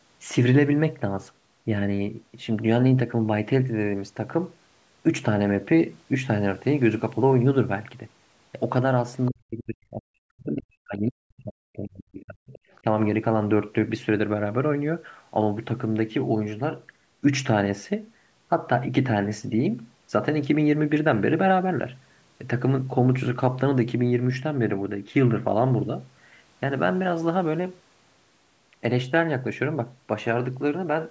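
From 9.28 to 12.55 s the talker's speech is pulled down hard, by something like 40 dB at its deepest, across roughly three seconds. This is speech suppressed in double talk, likely from an echo canceller that could not tell the near talker from loudspeaker echo while both sides spoke.

Right at the recovery, 12.53 to 12.8 s, a faint second voice surfaces about 25 dB under the speech: the other side's voice leaking through, likely residual loudspeaker echo the canceller left in the microphone signal. It sounds separate from the main talker, which distinguishes it from reverb, a smeared tail of the talker's own voice.

A last brief dip of roughly 15 dB follows at 12.81 to 12.85 s, another short bite of speech suppressed in double talk. The top end stops near 8 kHz throughout, consistent with ordinary call microphone processing.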